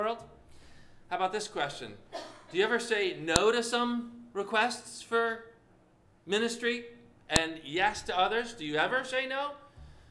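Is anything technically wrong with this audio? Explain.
Yes. File header played as audio at 3.36 s and 7.36 s: the audio was joined from separate WAV pieces, spaced 4.0 s apart, without stripping each piece's header, so those header bytes play as samples, producing a sharp, loud click at each join.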